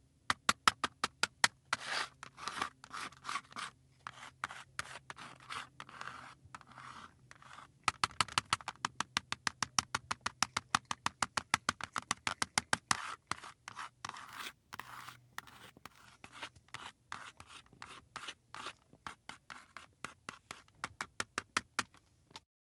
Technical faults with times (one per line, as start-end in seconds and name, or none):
14.27-16.05 imaging from sample-and-hold upsampling